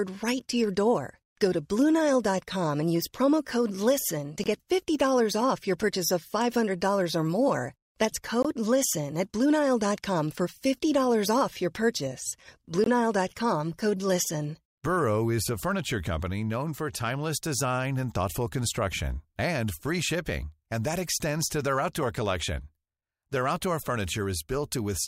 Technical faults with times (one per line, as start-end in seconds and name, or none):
4.44-4.47 Bluetooth dropout
8.43-8.46 Bluetooth dropout
12.84-12.87 Bluetooth dropout